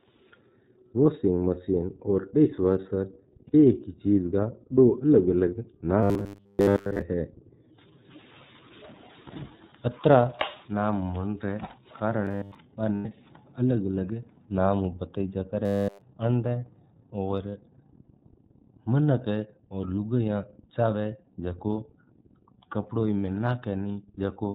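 Throughout, the iLBC codec limits the speech to narrowband, removing everything above 4 kHz. Its independent frame-by-frame coding leaves the speech plainly rough and synthetic, consistent with the 13.33 kbps, 30 ms mode.

Lost iLBC frames at 3.47 to 3.55 s: about 60 ms of audio is missing, which points to two 30 ms frames. The decoder fills the gap by repeating the last pitch cycle with noise, so it sounds like a brief buzzy, held vowel before the speech recovers at once.

Robotic sound from repeated short buffers at 6.03 to 7.02 s and 12.25 to 12.55 s: a rigid, metallic 100 Hz buzz replaces most of the speech. This likely comes from playback repeatedly looping a 10 ms buffer while fresh audio is skipped.

Lost iLBC frames at 12.96 to 13.06 s: about 90 ms goes missing, which fits three frames, and the gap is again covered by a short, buzzy held vowel.

Robotic sound from repeated short buffers at 15.66 to 16.02 s, just after "अलग नाम उ बताइजा": the same 100 Hz buzz returns, this time replacing the speech entirely for that span.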